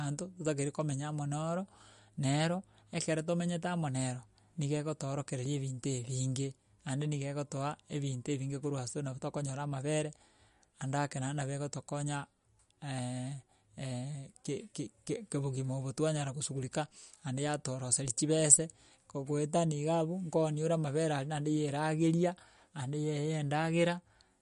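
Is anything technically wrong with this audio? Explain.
Yes. Throughout, there's a hard ceiling at 11.2 kHz and a watery, swirly texture with metallic chirps on s sounds: likely MP3 compression. A bit-starved encoder, fitting roughly 48 kbps, chops the treble and lets weak frequency components flicker on and off between frames.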